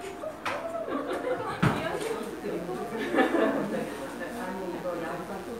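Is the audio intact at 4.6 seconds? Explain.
No, mains buzz runs from 1.60 s to the end at 5.59 s: switching spikes twice per 60 Hz cycle add a steady, raspy harmonic buzz roughly 20 dB below the sound.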